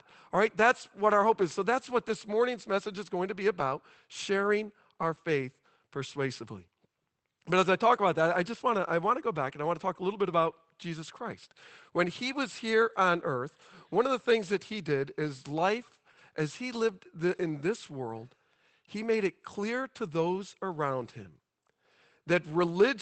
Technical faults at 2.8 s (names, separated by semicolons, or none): none